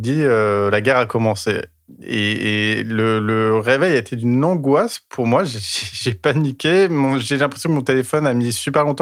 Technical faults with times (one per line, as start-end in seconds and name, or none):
none